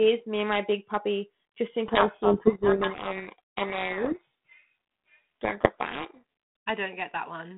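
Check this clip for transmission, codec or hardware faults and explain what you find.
There's one real fault here, a codec payload misread running from about 1.86 s to 6.23 s. The line is G.726 at 32 kbit/s, band-limited to roughly 150 Hz to 3.5 kHz. Partway in, the two ends stop agreeing on the bit order inside each G.726 code word. The decoder keeps taking in well-formed data but turns each flipped code into the wrong step size and direction. The speech ends up buried under harsh, grinding distortion until both sides line up again at 6.23 s.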